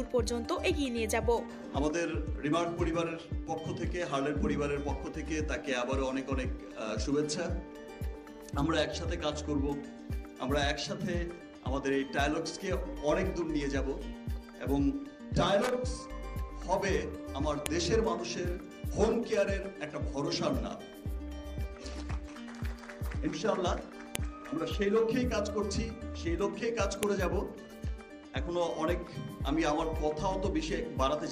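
Sharp, loud clicks at 17.66, 24.15 and 27.03 s are a file header played as audio at each join. Unlike ordinary splice clicks, they snap regardless of signal level.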